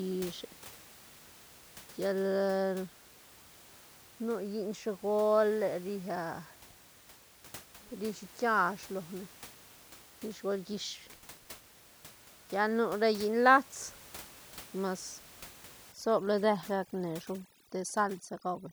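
From 15.92 s to the end of the clip at 18.72 s, overdone noise removal sets in. The reducer is pushed too hard, so individual frequency bands near its noise estimate are driven down or switched off, taking the quieter parts of the speech with them. The room noise, about 22 dB below the speech, drops and breaks up into twinkling specks. Unlike a simple low-pass cut, the loss flickers band by band rather than dulling everything evenly.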